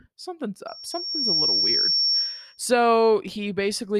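From 0.67 s to 2.60 s the speech is overtaken by loudspeaker feedback squeal: the microphone was hearing the loudspeaker it fed, and at 5.5 kHz the loop gain passed unity, so that tone grew on itself over roughly the first 0.7 s until it sat a few decibels above the speech. It sounds like a piercing, steady whistle. A spectrogram shows a single bright horizontal line at 5.5 kHz, and the waveform's envelope swells and then stays thickened.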